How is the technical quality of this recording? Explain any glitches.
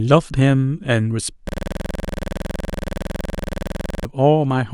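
There's one serious glitch here. From 1.49 to 4.05 s you get a system hang loop: the system froze while the sound hardware kept replaying the same 46.4 ms chunk of its ring buffer, which fits a 2048-sample buffer. That repeats around 55 times at 21.5 Hz, giving a harsh, rapid stutter, almost a buzz, in place of the speech.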